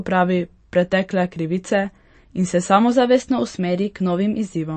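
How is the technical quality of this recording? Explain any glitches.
The recording is compromised by heavy lossy coding and a pitch jump near the end. Throughout, the speech sounds watery and swirly with nothing above 8.3 kHz, most likely MP3 compression at a rate that fits about 35 kbps. On a spectrogram, a flat ceiling appears with flickering gaps where the encoder dropped weak frequency lines. From 2.92 to 4.56 s, a drift correction step likely sped playback by 5.5%, raising pitch about 93 cents, nearly a semitone, before snapping back. Harmonics visibly shift upward throughout that stretch.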